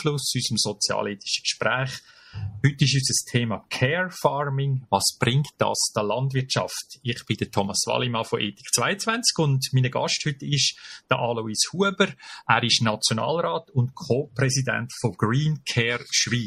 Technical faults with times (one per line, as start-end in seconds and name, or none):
none